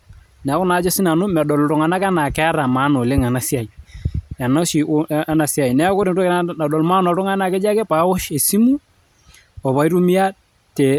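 Speech recording, no technical faults heard.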